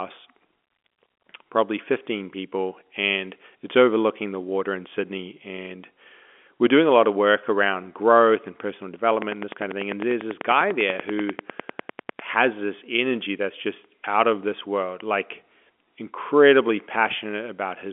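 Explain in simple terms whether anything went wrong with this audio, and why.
A train of clicks cuts into the speech from 9.22 to 12.20 seconds. It starts just after "around growth and personal" and stops just before "has this energy that's". The clicks come about ten times a second, evenly spaced, around thirty in all. Each one is much louder than the voice. They sound alike, like steady ticking. The likely cause is a pulse leaking in from nearby equipment or a faulty connection or power supply. The narrow, phone-like sound comes from ordinary G.711 telephone coding.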